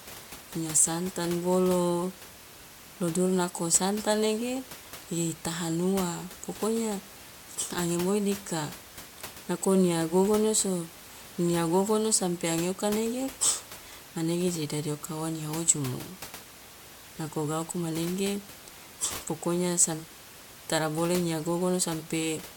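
No technical faults can be heard in the speech; the signal stays continuous and steady, with the room's own background noise sitting about 17 dB below the voice as part of the recording.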